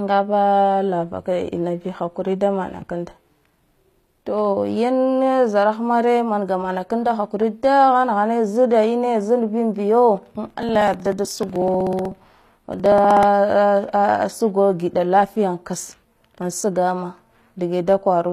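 The encoder likely rebuilt the treble by spectral band replication throughout the speech: only the lower spectrum was coded, and the upper bands were copied up from below and shaped by a coarse envelope, as HE-AAC compression does. The damage is plainly audible, and the sound points to a low bitrate of around 24 kbps. Because the synthesized treble is not the original, harmonics fail to line up across the crossover, and s sounds come out gritty, metallic or lispy. Nothing remains above 14.9 kHz.

From 10.50 to 13.23 s, something blocked the USB bus or audio driver at a fixed 62 ms interval. These are periodic USB or driver dropouts. Each time, roughly 2 ms of audio was skipped outright rather than filled with silence, around fifty times across the stretch. The result is a regular train of ticks, about sixteen per second, that are heard only while the speech carries signal.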